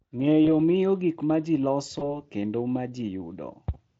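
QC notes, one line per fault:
0.45 to 0.50 s and 1.99 to 2.22 s, VoIP packet loss concealed by the speech codec: each time a single 20 ms frame drops out, and the decoder fills the gap by extrapolating its last pitch and spectral envelope at falling gain, giving a short stretched, fading stretch. The first, just before "miyo gik ma ji", is brief. The second, between "miyo gik ma ji" and "kendo ma", lingers about 230 ms because each rebuilt frame feeds the next, so recovery lags after packets resume. The Speex coding itself leaves at most faint damage, consistent with a high-rate setting near 34 kbps.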